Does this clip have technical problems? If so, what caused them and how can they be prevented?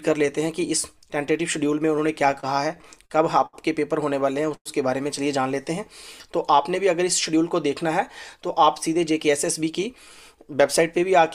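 Yes. Between 2.31 and 3.55 s there is repeated stalling (stutter). The flow stops seven times, and the receiver holds the last sound through each short gap. Together the gaps take 177 ms, the longest 71 ms, about 14% of that stretch. Nothing is lost, but the sound drags and hiccups. What sets it apart from a freeze is the cluster of brief, repeated holds rather than one longer stop. Keeping packet delivery steady, for example by prioritising call traffic on congested links, prevents this.

From 4.54 to 4.67 s a single hold fills 114 ms. The held sound decays, and its last 60 ms are silent. The sound then resumes exactly where it stopped, pushing everything after it 114 ms later. This is most likely a call audio freeze, with packets held up in transit until the jitter buffer ran dry. Unlike the stutter, it is one isolated break that fades out, with nothing dropped. A more stable network path, or a slightly deeper jitter buffer, would prevent it.

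From 7.29 to 7.91 s and again from 8.35 to 9.95 s there is jitter buffer speed-up. Having built up more buffered audio than it aims for, the receiver trimmed many tiny pitch-period slices, roughly 40 ms in the first stretch and around 70 ms in the second, so the sound runs at 105% speed. The pitch stays the same, which distinguishes this from a sample-rate mismatch, where pitch would rise with speed. Avoiding the delay build-up upstream removes the need for this catch-up.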